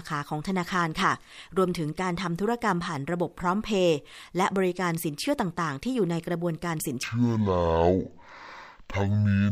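From 7.03 s to 9.52 s, stereo read as mono: interleaved left and right samples play as one channel, so the speech runs at half speed, an octave lower.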